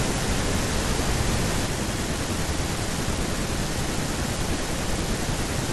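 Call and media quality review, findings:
Doubled audio track, 0 to 1.66 s, present from clip start. Full-band copy trails by roughly 150 ms at about equal level, no decay. Spectrogram: every speech onset repeated at a fixed offset. Likely duplicate capture path or misaligned edit. Copy ends abruptly at 1.66 s.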